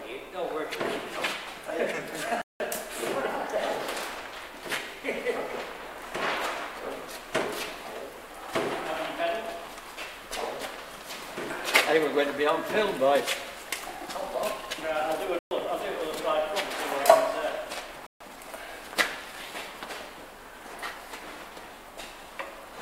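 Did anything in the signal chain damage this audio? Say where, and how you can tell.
Yes, in the driver or buffer stage: blocks of digital silence at 2.42–2.60, 15.39–15.51 and 18.07–18.20 s. The output was left unfilled or fed invalid values, and the first gap fits an 8192-sample buffer.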